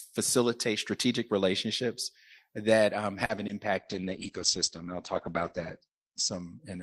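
Right after "strategic relationships that um", a short stall from a late packet runs from 3.25 to 3.31 s. The jitter buffer emptied, so the last sound was stretched by about 40 ms before playback resumed, adding roughly 40 ms of delay. On a spectrogram, the harmonics run flat and unchanged for that span.

Two short concealed packet losses follow, at 3.35 to 3.39 s and 3.47 to 3.51 s. Each drops 20 ms of real audio, which the decoder covers by extending the preceding sound. They come across as a brief smear or wobble. On the waveform, the fill looks suspiciously regular before it blends back into the real signal.

From 3.79 s to the end, a call bitrate drop takes the stream from 32 kbps to 9 kbps, staying at the lowest rate for about 2 s. The audio bandwidth narrows from 20 kHz to 8 kHz, so the sound turns muffled and watery. On a spectrogram, everything above 8 kHz is abruptly cut off.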